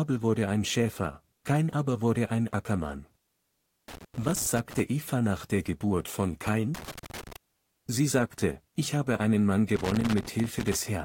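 Loose connector crackle breaks into the speech at 3.88 to 4.80 s, 6.75 to 7.36 s and 9.76 to 10.75 s: a worn contact intermittently making and breaking, chopping the signal into irregular scratchy bursts. On a waveform these show as jagged dropouts and spikes; a spectrogram shows scattered broadband vertical streaks.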